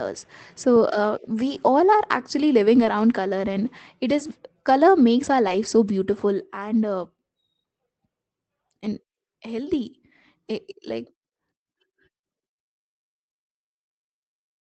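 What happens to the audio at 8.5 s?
Nothing goes wrong at 8.5 s: the audio is intact there and carries only the ordinary band-limited character of the call path it travelled through.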